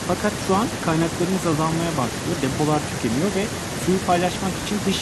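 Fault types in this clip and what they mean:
No faults turn up anywhere in this bit of speech, so there's nothing here to list.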